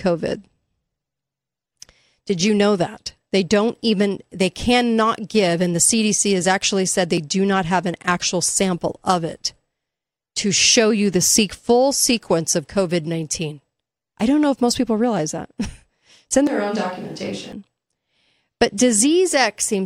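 A switch to a distant microphone runs from 16.47 to 17.53 s: the speech turns suddenly hollow and thin, some 5 dB quieter, with more room noise, likely the close microphone dropping out.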